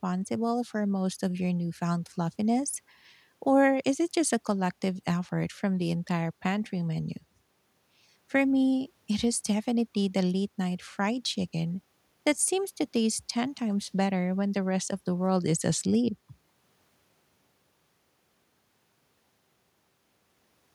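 Listening to the speech in the clip, nothing stood out as a technical problem at any point.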